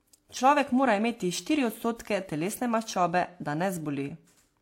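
Throughout the speech, the audio has likely passed through transcoding between lossy codecs, with the sound pointing to a low-rate HE-AAC encode followed by WMA 1. The second codec re-encodes the first one's artefacts and adds its own, so both are heard together, with nothing above 16.2 kHz.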